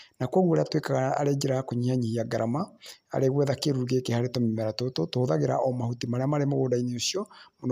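Speech recording with no audible technical faults anywhere in its duration.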